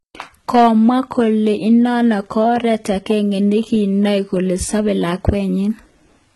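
Speech runs throughout with heavy codec damage: treble is rebuilt, gritty and metallic, nothing above 11.8 kHz, likely HE-AAC compression at a bitrate around 16 kbps, unlike a plain low-pass that would simply dull it. Hard clipping, overdriven by about 5 dB, adds harsh crackle only at 0.54 to 0.89 s and at 5.28 s, confined to those peaks rather than spread through the clip like the codec grit.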